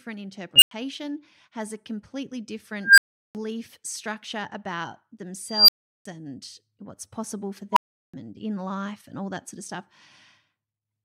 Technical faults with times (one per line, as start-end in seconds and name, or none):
0.56-0.71 unstable filter
2.81-3.35 unstable filter
5.46-6.05 unstable filter
7.72-8.14 unstable filter